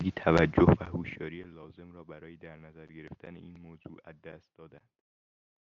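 Zipper noise runs from 0.44 to 1.59 s, while the speech level drops by roughly 25 dB. Instead of gliding down, the gain moves in coarse unsmoothed increments, around 200 a second, and each jump leaves a tiny discontinuity in the waveform. Strung together, those clicks form a fine buzzing or zipping texture laid over the speech for the length of the fade.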